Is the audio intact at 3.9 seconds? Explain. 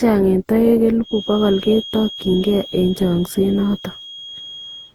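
No. At 3.9 seconds two faults overlap.

The first is generation loss, and it runs through the whole clip. The speech was likely decoded and re-encoded something like ten times with a lossy codec, in a way that fits a 48 kbit/s Opus chain. Each pass re-quantises on a shifted frame grid, so the errors pile up. The result is swirly, hollow, smeared speech with blurred consonant attacks, and nothing is present above 20.2 kHz.

The second is a feedback whistle, which starts at 0.99 s and continues to the end. The loudspeaker-to-microphone loop likely sits right at the edge of feedback, so a single tone at 3.3 kHz keeps ringing without building up. It sounds like a thin, steady whistle about 20 dB below the speech, swelling and fading slowly in level.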